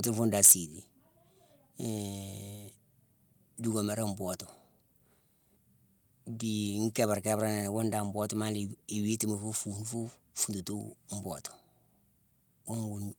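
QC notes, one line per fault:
0.43–0.53 s, microphone overload: right after "fune dan" the loudest peaks flatten against the converter ceiling, roughly a tenth of samples clipped, about 10 dB over full scale. The squared-off tops give a harsh, crackling edge, likely from excessive microphone input volume.
0.52 s, microphone volume stepped down: at the tail of that distorted peak, the voice and background both drop by about 3 dB in a single step. This is likely the call software cutting the device's input volume after detecting clipping.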